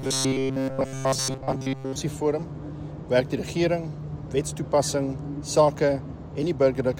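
Right from the start, 0.01 s to 1.97 s, there's robotic sound from repeated short buffers: a stiff, metallic buzz at 133 Hz. It's likely audio arriving too seldom, with roughly 7.5 ms chunks looped to fill gaps, replacing most of the real signal.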